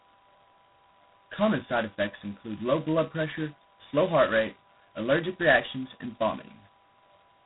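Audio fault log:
Throughout, G.726 ADPCM: harsh, rasping hiss riding the speech level, nothing above 3.9 kHz; heavy damage consistent with 16 kbit/s, two bits per sample.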